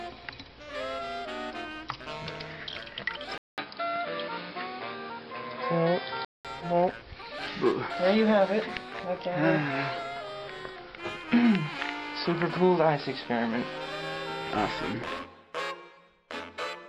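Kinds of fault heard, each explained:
Input switched to a poorer device: from 3.38 s to 6.45 s the sound turns dull and boxy, with nothing above 5.2 kHz, a level shift of about 5 dB and a fresh background noise about 35 dB below the signal, then clears again. A 200 ms gap at the switch, plus the changed tone and noise floor, point to a different input path being likely, rather than a simple filter or codec bandwidth drop.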